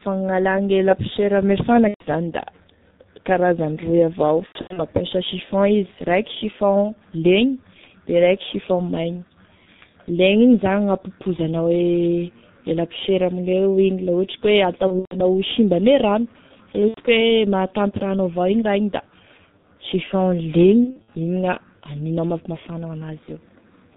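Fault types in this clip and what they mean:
G.723.1 codec: The whole recording passes through this low-rate telephony coder at about 6.3 kbit/s. Nothing above 4 kHz survives, and its slowly updated voice model makes the speech muffled and hoarse with smeared consonants. Unlike simple band-limiting, it adds a rough, synthetic texture.
VoIP packet loss concealed by the speech codec: At 1.88, 4.46, 14.87, 16.88 and 20.84 s, gaps of 90 to 210 ms are filled by the decoder stretching its last sound, which fades away. From the third lost frame in a row it is muted, and the voice stays weak briefly afterwards.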